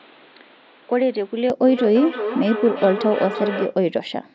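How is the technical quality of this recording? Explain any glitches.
Two clear problems, both in the first four seconds or so, on top of call-style processing that tops out around 8 kHz.

From 0.0 to 1.5 s the sound is dull and a bit quieter, roughly 5 dB down, with a faint new noise floor about 30 dB under the speech. That's likely the input switched to a poorer device, a narrower-band mic, and it changes with no gap.

From 1.61 to 3.83 s there's feedback echo between two devices. One device plays back what the other's mic sent, that mic picks it up again, and each bit of speech returns roughly every 300 ms, peaking about 9 dB below the direct sound.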